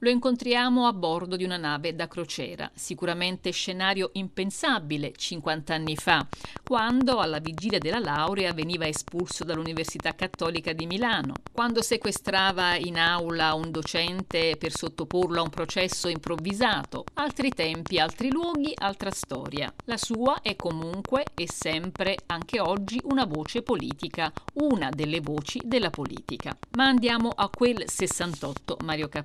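From 5.87 s to 29.17 s, a train of clicks runs over the sound. The pulses arrive regularly, about 8.8 per second, roughly two hundred in all. They peak about 15 dB above the audio. The ticking continues through pauses. Nearby interference is the likely source.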